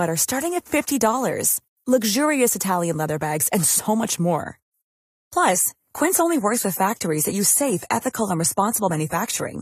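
Right after "bags and so much", at about 4.42 s, the speech suddenly gets duller and stays that way to the end. There's no gap or dropout, just a quality drop, which is the classic sign of an adaptive stream at a lower bitrate. The connection slowed, so the player switched to a leaner encode, something like AAC-LC going from around 96 down to 32 kbit/s. Nothing above 14 kHz survives, and codec artefacts creep in.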